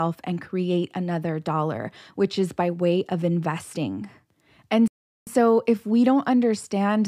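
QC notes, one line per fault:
4.88–5.27 s, playback stall: the speech cuts to dead silence for about 0.39 s mid-flow, then picks up again with "so if we don't". Likely the player ran dry of buffered data or its thread got blocked, so output simply froze until it recovered.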